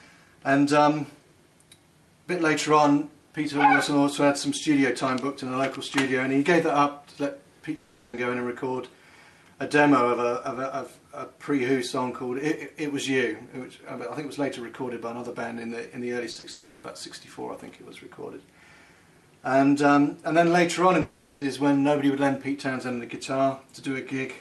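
A long network dropout is the likely cause of three gaps, at 7.75 to 8.15 s, 16.51 to 16.85 s and 21.01 to 21.43 s, each lasting 0.3 to 0.4 s. In each one, the receiver stretches the last sound into a fading buzz or hiss across the whole gap, and the audio resumes with that stretch missing. Just before the second dropout there are two short concealed packet losses, at 16.31 to 16.37 s and 16.39 to 16.45 s. In each, about 40 ms never arrived, and the decoder patched the hole by extrapolating the preceding sound before blending back, which is heard as a brief smear or wobble. The band-limiting above about 12 kHz points to an Opus call codec on a WebRTC path.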